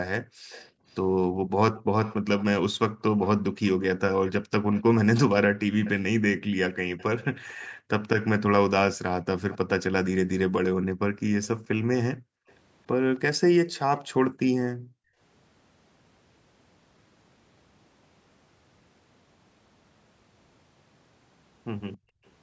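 From 0.22 to 3.02 s, background gated by the echo canceller makes the room sound dip by about 40 dB in brief drops. From 0.5 to 7.67 s, an echo leak follows the speech 274 ms late, about 20 dB down. The likely cause is a loudspeaker whose echo canceller left some pickup behind. More gating dips come at 7.73 to 7.89 s and 10.86 to 12.47 s. The echo returns briefly at 9.51 to 9.57 s, then again from 11.44 to 14.0 s, about 25 dB down. The last gating dips fall at 14.29 to 15.19 s and 21.97 to 22.24 s, the final one about 35 dB deep.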